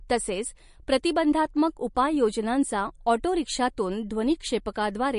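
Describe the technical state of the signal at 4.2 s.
At 4.2 s the speech carries damage present throughout the clip, likely MP3 compression at a low bitrate, around 40 kbps: a starved encoder discards everything above 10.6 kHz and toggles weak spectral lines frame by frame, giving a watery, swirling sound. A spectrogram shows a flat ceiling at 10.6 kHz with speckled, flickering holes below it.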